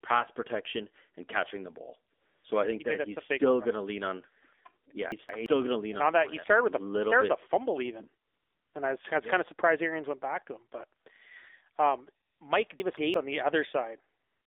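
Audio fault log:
Throughout: AMR narrowband mobile codec. The speech has passed through the AMR-NB mobile speech codec. Its buzzy, synthetic edge fits a low mode of about 7.4 kbps. Only a band from roughly 250 Hz to 3.6 kHz survives. On a spectrogram, energy stops sharply at a ceiling near 3.6 kHz, with an empty floor below 250 Hz. Harmonics look smeared and coarse, because a vocal-tract model driven by a few pulses rebuilds the sound instead of carrying the original waveform.
2.14–2.44 s, 4.84–4.86 s, 8.26–8.74 s, 11.00–11.06 s, 12.26–12.40 s and 14.20–14.50 s: AMR comfort noise. In each gap the sender judged the line silent and stopped sending speech frames, so the receiver filled in synthetic noise built from a rough level-and-spectrum estimate. The longest gap falls after "with a fumble even" and before "and I was I". On a spectrogram these spans show flat, featureless haze that switches on and off abruptly. 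The waveform shows a steady, low, even band with no texture.
5.12–5.46 s and 12.80–13.14 s: chunks out of order. In each span, a block of about 171 ms arrived one chunk late and plays after the block that should follow it. Nothing is missing, but the sequence is scrambled, so the sound jumps backwards and forwards with three hard joins. The first comes just before "going to lean and", the second just before "on the". The waveform shows abrupt discontinuities at each join, and the spectrogram shows vertical seams and mismatched formant tracks.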